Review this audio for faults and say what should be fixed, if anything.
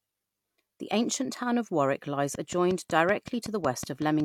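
A train of clicks runs from 2.35 s to 4.21 s: about ten sharp, similar ticks at a regular 5.4 per second, peaking roughly 10 dB above the speech and audible through pauses as well. The likely cause is interference from nearby equipment or an interface briefly injecting the same pulse repeatedly. On a spectrogram they show as evenly spaced thin vertical lines spanning all frequencies, and on the waveform as narrow spikes standing above the speech envelope. To prevent it, move or shield nearby electronics and check the interface's cabling, grounding and power.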